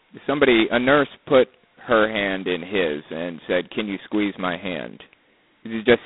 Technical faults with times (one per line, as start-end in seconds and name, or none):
0.00-6.06 G.726 ADPCM